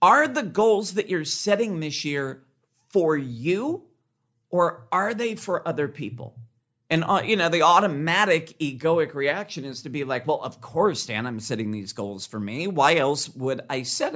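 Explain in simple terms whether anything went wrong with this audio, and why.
Nothing went wrong with this speech recording. At no point does it show any sign of a technical problem.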